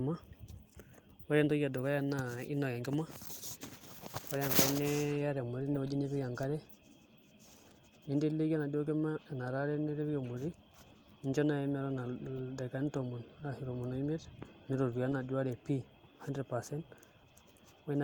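No technical faults turn up anywhere in this speech recording. The Opus voice compression runs at 24 kbps in its hybrid, fullband mode, carrying content up to 20.2 kHz and leaving only a light trace of coding on the sound.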